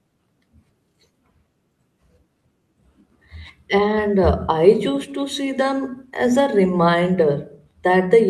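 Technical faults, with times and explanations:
No technical faults can be heard in this speech clip.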